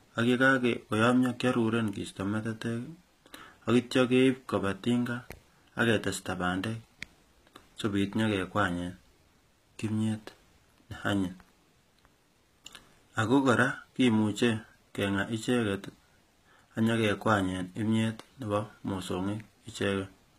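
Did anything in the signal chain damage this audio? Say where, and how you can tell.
Yes: HE-AAC compression throughout, at the codec stage. The treble, cut off above 14.9 kHz, sounds rebuilt from lower bands and turns gritty, likely from a low bitrate around 20 kbps.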